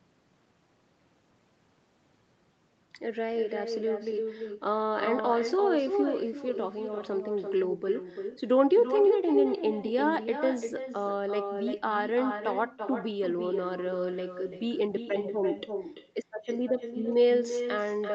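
From the start to the end, every phrase is shadowed by a thinner copy about a third of a second later and only about 7 dB quieter. This is echo with no canceller: the far end's loudspeaker feeds its microphone. Unlike reverberation, it is a distinct delayed repeat, not a smooth tail.

From 17.12 s to the end at 18.15 s, a faint galloping dit-dit-dit of short buzzes sits well below the speech. These are GSM signalling bursts from a nearby 2G phone, rectified by the audio circuit and pulsing at 217 Hz. Unlike steady mains hum, they arrive in clustered bursts.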